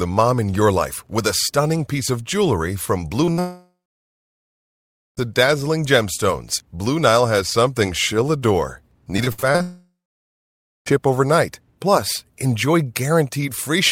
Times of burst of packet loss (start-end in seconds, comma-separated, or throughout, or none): 3.31-3.39